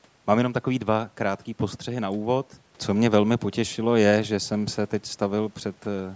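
No technical faults can be heard anywhere in the speech. The call microphone processing is working as intended: the lowest bass is trimmed by its high-pass filter, and nothing reaches above 8 kHz.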